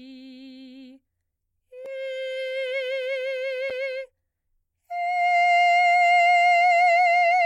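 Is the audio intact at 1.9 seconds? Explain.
No, not quite. Right around there, at 1.86 s, the music has a block of digital silence about 1.5 ms long. A short run of samples, which fits a 64-sample block, was replaced by zeros, so the signal drops straight to nothing and jumps back with no fade either side. With a gap that brief you don't hear a hole. The two hard edges run together into a single tick.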